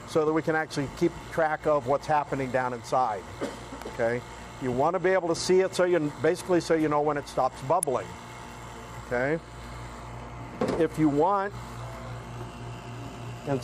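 Two brief snaps sit on top of the audio, one at 3.82 s and a louder one at 7.83 s, peaking around -20 dBFS and -10 dBFS respectively. They are electrical switching spikes, likely from a nearby switch, motor or static discharge arcing into the audio line. Unlike dropout clicks or buffer glitches, the underlying sound carries on unbroken beneath each snap. The spike is added on top rather than replacing or cutting the sound.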